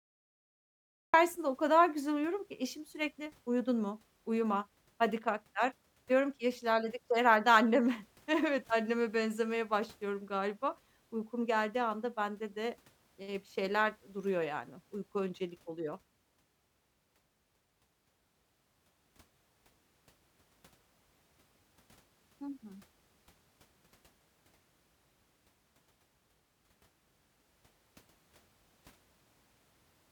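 Digital silence runs from 0 to 1.14 s, then speech enters abruptly mid-sound with no attack: a cut-off start, because capture began late.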